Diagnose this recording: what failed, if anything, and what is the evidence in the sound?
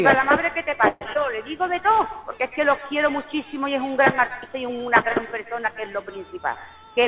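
From 0.88 to 1.03 s the sound stalls. The last instant is stretched into a fading buzz or hiss for about 130 ms, then resumes where it stopped. This is a call audio freeze, likely from delayed packets draining the jitter buffer. A spectrogram shows a smeared, decaying horizontal band, and the waveform shows a decaying tail rather than silence.

At 1.13 to 1.17 s there is a brief smear, a short concealed packet loss of about 40 ms at the network and decoder stage. The receiver extended the preceding sound, then crossfaded back. A spectrogram shows a blurred column where fine detail breaks.

From 6.39 to 7.03 s the sound runs about 11% fast at unchanged pitch, a jitter buffer speed-up. Around 70 ms was cut out in pitch-period pieces to shrink excess delay. A spectrogram shows events squeezed in time with harmonics at fixed frequencies and nothing above 4 kHz, consistent with a G.711 line. 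The waveform shows splices at matching points in the cycles.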